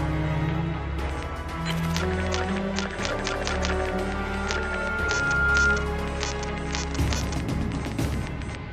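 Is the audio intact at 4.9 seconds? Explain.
No. Loudspeaker feedback squeal runs from 3.59 to 5.96 s. The microphone re-amplifies the speaker, so a 1.4 kHz tone swells over about two seconds, ending roughly 10 dB above the sound.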